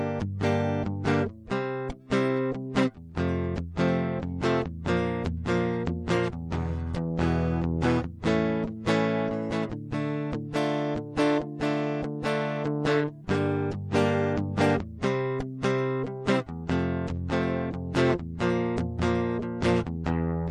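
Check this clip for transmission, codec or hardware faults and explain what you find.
One codec fault runs through the whole clip, likely from MP3 compression. The music sounds watery and swirly, with metallic chirping on cymbals and sibilants, and smeared attacks. The encoder, short of bits, lets weak frequency lines flicker between frames, damage that fits a low bitrate near 64 kbps.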